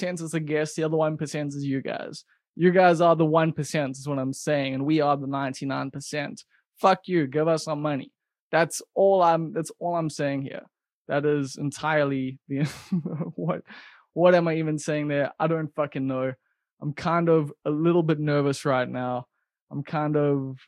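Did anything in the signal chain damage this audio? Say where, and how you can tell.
No, nothing in this speech recording stood out as damage from any stage of the signal chain on listening.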